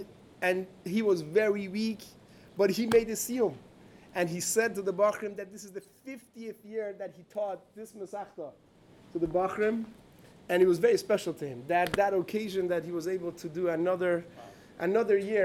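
A level reduction between 4.72 and 5.76 s is applied in unsmoothed 2 dB steps, roughly seven per second, for a drop of about 10 dB. Each jump clicks, so zipper noise ticks over the audio while it fades.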